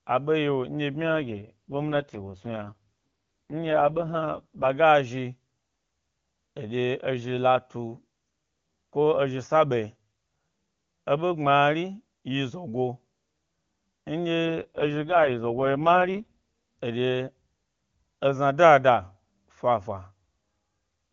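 Speech over an AMR wideband (HD Voice) link, with two AMR rate drops from 1.01 to 4.70 s and from 14.46 to 16.80 s. In each stretch the bandwidth stays put and nothing drops out, but the speech turns rough and synthetic. That roughness fits the codec stepping down from 23.85 to 6.6 kbit/s so that a weak radio link can spend bits on error protection.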